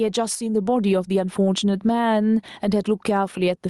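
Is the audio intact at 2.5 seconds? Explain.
No, not really. At 2.5 seconds you're in the middle of gain pumping that runs through the whole clip. It sounds like the gain is set far too high and a fast limiter or compressor is likely clamping down on every loud syllable, then letting go in the gaps. The level swings around 10 dB, so it sounds squashed and uneven.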